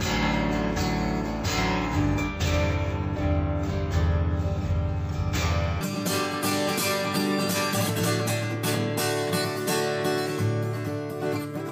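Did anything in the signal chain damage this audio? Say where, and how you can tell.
Yes. From 0.0 to 5.81 s the sound plays at half speed and a full octave (12 semitones) low, with a mirrored copy of its spectrum sitting in the upper half of the band. This is stereo read as mono, a fault in the sample-format conversion stage. Interleaved left and right samples were taken one after another as a single channel, so each frame counts as two samples, doubling the duration and halving the pitch.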